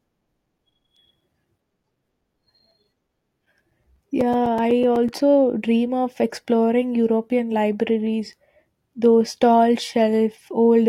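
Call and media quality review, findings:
Periodic USB or driver dropouts, 0.09 to 5.21 s, ending just before "dream of exploring". Regular ticks every 0.125 s, about forty, each a few ms of silence. Probably a background task stalling the USB bus or audio driver.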